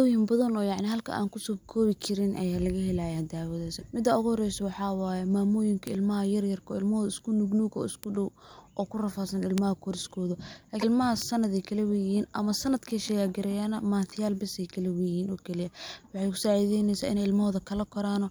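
Sharp, full-band single ticks at 0.92, 5.87, 8.04, 9.58, 11.22 and 12.91 s are bit error spikes: a flipped bit momentarily throws the sample value by a power of two, with the 9.58 s tick pointing to a few adjacent samples. At 3.80 to 3.83 s and again at 10.80 to 10.83 s, the audio jumps ahead with a brief glitch lasting about one MP3 frame, likely a broken MP3 bit reservoir after dropped frames.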